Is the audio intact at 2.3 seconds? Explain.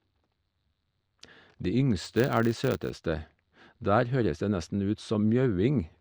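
No. At 2.3 seconds the speech falls inside a stretch from about 1.99 to 3.07 s where a filter is restarted on every block. Its internal state is cleared at each block boundary, so every block starts from silence and opens with a small transient. These repeat at 100 Hz, which points to blocks about 10 ms long, and they fuse into a buzz riding under the speech that grows and shrinks with its level.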